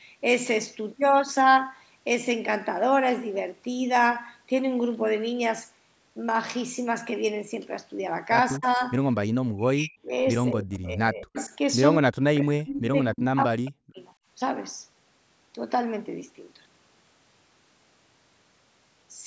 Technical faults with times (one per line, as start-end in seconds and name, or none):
8.58-8.80 speech suppressed in double talk
9.54-10.13 speech suppressed in double talk
10.51-11.37 speech suppressed in double talk
11.36-11.56 echo leak
12.01-13.99 speech suppressed in double talk